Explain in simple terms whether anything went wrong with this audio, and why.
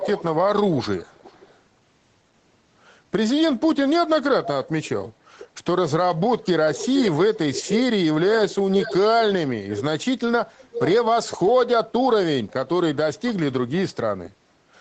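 Something went wrong: an echo leak. A delayed copy of the speech follows the original by just under half a second. It comes at 0 to 0.24, 0.7 to 1.6, 6.44 to 7.78, 8.49 to 8.97 and 10.56 to 10.9 seconds. It is faint early on, very faint at 0.7 to 1.6 seconds, then louder. The likely cause is a loudspeaker on one end. Its echo canceller let sound slip back.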